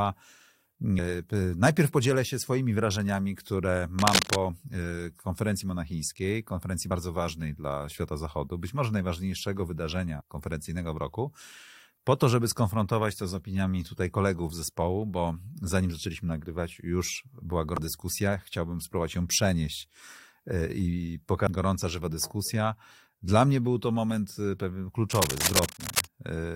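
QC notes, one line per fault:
3.99–4.36 s and 25.11–26.05 s, cable scratch noise: likely a worn cable, connector or control being moved, so its contact resistance jumps about rapidly. That injects dense, uneven bursts of noise, heard as scratching or rustling roughly as loud as the speech itself.
6.90 s, 10.20–10.22 s, 17.77 s, 21.46 s, damaged data in a compressed stream: corrupted bytes make the decoder misread or discard frames, lose sync and hunt for the next frame header. Each spot comes out as a brief chirp or blip.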